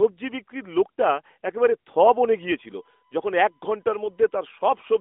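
From 2.35 s to the end, a USB whine creeps in: a steady 1 kHz tone sitting well below the speech, heard through the narrow phone-style band. It's the bus's 1 ms frame timing leaking its current draw into the audio through the power or ground.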